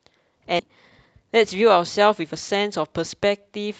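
At 0.59 to 0.61 s a skip ahead drops roughly 0.7 s of speech, and playback jumps forward with no fill, splicing both sides almost directly. From 0.69 to 2.48 s a jitter buffer speed-up trims pitch periods to shed about 200 ms of excess delay, so speech runs at 110% without a pitch change and sounds hurried.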